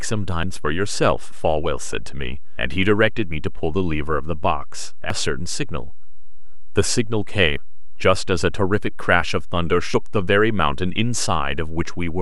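Short glitches cut through this speech clip at 0.43–0.46, 2.58–2.61, 5.10–5.14, 7.57–7.60 and 9.94–9.97 s, each about 32 ms long. They come from damaged data in the compressed stream: corrupted bytes made the decoder misread those frames and lose sync before locking back on. A DC offset runs through the whole recording. It can't be heard directly, but the waveform sits shifted off zero by a constant amount, wasting headroom and leaving steady energy at the very bottom of the spectrum.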